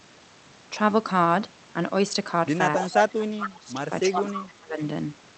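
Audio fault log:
2.77–2.98 s, 3.2–3.75 s, 4.1–4.8 s: speech suppressed in double talk. The speech dips by roughly 10 dB in the first stretch and by roughly 20 to 25 dB in the later two, thinning and partly dropping out. This is likely an echo canceller mistaking overlapping talk for echo and attenuating both.
2.87–3.11 s and 4.27–4.42 s: echo leak. A copy of the speech returns 268 ms late. In the first burst it is about as loud as the original, and in the second about 10 dB lower. Loudspeaker pickup likely slipped past the far end's canceller and was sent back.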